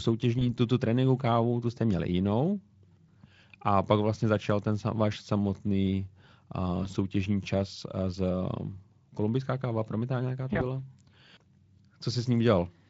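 Speech sent over a Speex link shows VoIP packet loss concealed by the speech codec at 0.39–0.46 s, 6.83–6.89 s and 10.53–10.60 s. Each dropout fits a single lost 20 ms frame. The decoder stretches the previous pitch and filter into a brief buzzy or noisy, fading smear, and the sound stays weak or distorted for tens of milliseconds afterwards.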